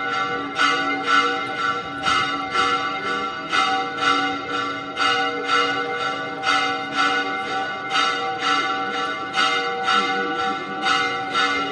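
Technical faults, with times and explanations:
Throughout, doubled audio track: every event in these sounds returns as a second, full-band copy about half a second later and around 5 dB quieter. The copy carries no decay or added room colour, so it registers as a distinct repeat rather than an echo, and the fixed gap makes transients stutter. This is likely a second capture through a slower path being mixed in alongside the original, holding the two copies out of step.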